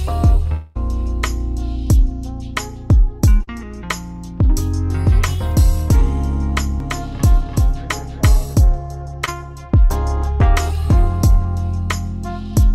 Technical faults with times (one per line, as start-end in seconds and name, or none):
0.53-0.77 long network dropout
3.43-3.49 short concealed packet loss
6.80-8.42 doubled audio track
9.25-9.29 short concealed packet loss